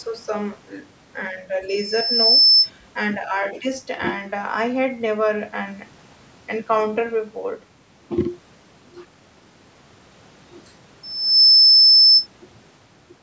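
From 1.68 to 2.70 s and again from 11.03 to 12.27 s, a loudspeaker feedback squeal at 5.3 kHz swells within well under a second to well above the speech. The loop's runaway gain makes it grow from nothing, rather than sitting at a steady level like an interfering tone.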